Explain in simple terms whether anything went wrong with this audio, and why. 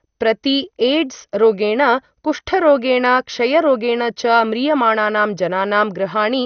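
The speech sounds dull and muffled from start to finish, with a gurgling, grainy roughness clinging to it, plainly audible the whole way through. Nothing comes through above about 6.5 kHz, so the crisp top end is missing. This is most likely MP2 compression squeezed too hard: the format divides the sound into narrow slices, runs out of room, switches off the highest slices, lets others flicker on and off, and stores the remaining ones coarsely.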